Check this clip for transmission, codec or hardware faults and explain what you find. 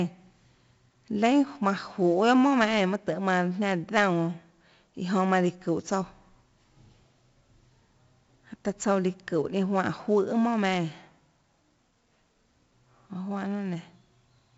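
There's one fault, and it runs through the whole speech clip: 4-bit ADPCM compression. Each sample is coded as a small step from a prediction, so the error rides along with the level as gritty hiss on loud passages. Nothing above 7.7 kHz survives, and the heavy damage fits a 64 kbps stream.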